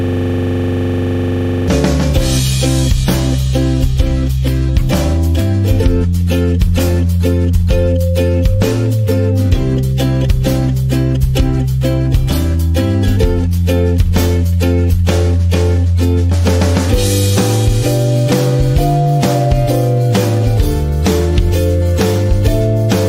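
Right from the first instant the clip is already caught in a system hang loop, which runs to 1.68 s. The machine or its driver stalled while the audio hardware kept replaying the same ring buffer, so a single 42.67 ms slice of sound repeats exactly, close to forty times. That loop length fits a 2048-sample buffer. At about 23.4 Hz the repetition lands between a buzz and a stutter: a hard, grainy rattle with a steady pulse, until normal playback resumes.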